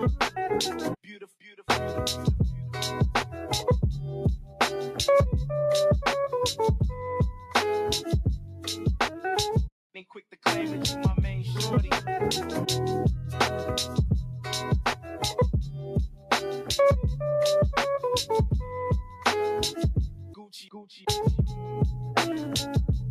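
A speech-tuned noise suppressor is running across the whole clip, treating steady material, ambience and decays as noise. The level swings by a few decibels as it reacts. Unlike a compressor, it leaves onsets intact and pulls down only what sustains, giving a pumping, thinned-out texture. At four points the sound is cut by the noise suppressor more deeply: 1.04–1.63 s (about 10 dB), 8.40–8.64 s (about 7 dB), 16.10–16.31 s (about 11 dB) and 20.10–20.75 s (about 12 dB). Here held portions sink and tails end early while sharp starts survive, which separates this from a dropout or level fade.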